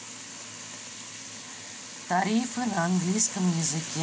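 From 2.09 to 3.96 s there's automatic gain rising: the gain control decides the speech is too quiet and ramps up by about 4 dB, so voice and background swell together.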